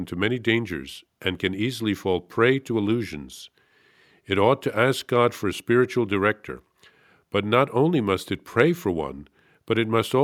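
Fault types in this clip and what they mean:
No faults are audible in this speech recording.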